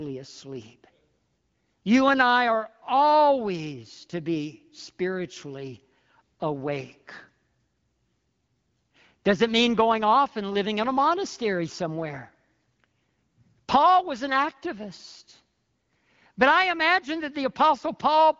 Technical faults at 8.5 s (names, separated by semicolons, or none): none